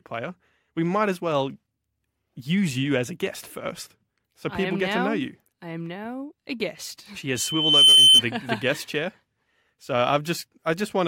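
From 7.36 to 8.22 s, loudspeaker feedback squeal: a single 3.1 kHz tone swells over about half a second to well above the speech, unlike a steady hum.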